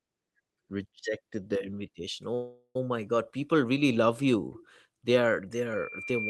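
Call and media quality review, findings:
Call audio freeze, 2.34–2.76 s: sound stalls, last sound stretched as fading buzz, near-silent about 70 ms; likely jitter-buffer underrun from delayed packets, resumes where it stopped, adding 408 ms delay.

Loudspeaker feedback squeal, 5.73 s to end: single 2.4 kHz tone swelling over roughly a second to about 10 dB above the speech; mic picking up its own loudspeaker, loop gain above one.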